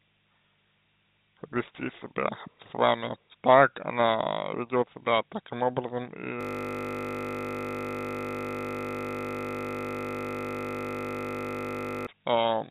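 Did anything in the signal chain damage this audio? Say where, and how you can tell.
Yes, and it's mostly a timing problem. The first culprit is clock drift between sender and receiver, at the network and buffer stage. The sending end's clock is running fast, by roughly four percent, so audio keeps arriving quicker than the receiver plays it out. The jitter buffer fills steadily instead of holding level, and that pressure is there for the whole clip. The sound comes through the G.711 A-law call path with nothing above 4 kHz.

The receiver fights that drift with repeated timing corrections, from 0.08 s right through to 12.54 s. To keep the buffer from overflowing, it keeps trimming out small slices, all in the same direction, at a pace that works out to about 104% speed. The cuts aren't evenly spaced, so what you get is a slightly uneven tempo with little hiccups scattered through, rather than any single obvious glitch.

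The nastier one is a system hang loop at the driver and buffer level, from 6.41 s to 12.07 s. Something on the machine stalled while the audio hardware kept cycling the same 20 ms chunk of its ring buffer, replaying it hundreds of times. A loop that short repeats at 50 Hz, so instead of a stutter it turns into a steady, droning buzz at that rate, standing in for the real audio for about five and a half seconds.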